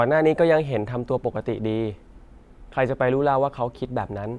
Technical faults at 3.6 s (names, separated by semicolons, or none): none